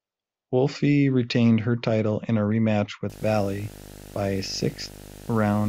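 Speech, with video or display buzz from 3.1 s, just after "title in a rematch", to the end. A 50 Hz field-rate buzz sits roughly 20 dB below the speech, with a 15.6 kHz line tone that mains hum lacks.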